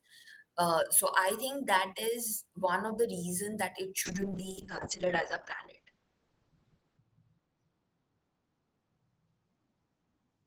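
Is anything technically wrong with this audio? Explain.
Yes. A call bitrate drop starts at 4.07 s and lasts to the end. The bandwidth estimate fell and the encoder coarsened its coding, pointing to a fall from 32 to 8 kbps. Highs above 8 kHz vanish, leaving the speech rough and muffled, worst for about 2.9 s.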